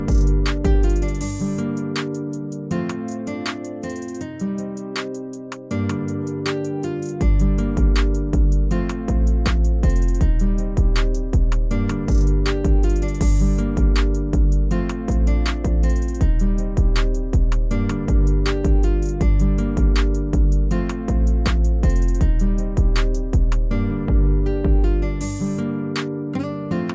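No technical fault can be heard anywhere in the recording; the signal stays stable and intact throughout.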